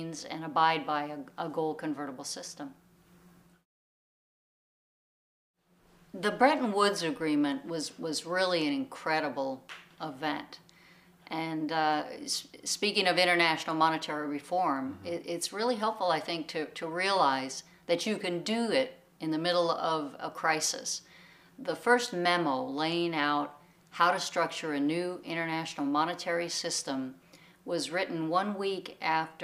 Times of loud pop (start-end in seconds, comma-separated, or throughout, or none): none